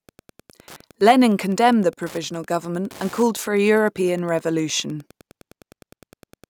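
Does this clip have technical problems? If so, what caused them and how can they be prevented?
Yes. Wi-Fi interference ticks under the speech throughout, about ten times a second and well below the speech level. A nearby Wi-Fi radio sends a beacon every 102.4 ms, which the audio circuitry rectifies into clicks. Keep Wi-Fi devices away from the microphone and interface, and use shielded cabling.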